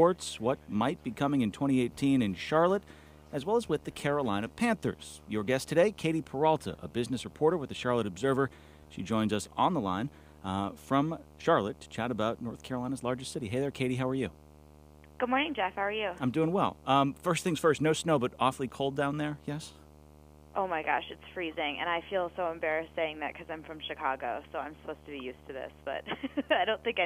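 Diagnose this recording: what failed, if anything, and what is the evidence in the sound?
Video or display buzz runs throughout: a 75 Hz buzz with hash above it, roughly 25 dB below the signal, from a display or video cable coupling into the analogue wiring.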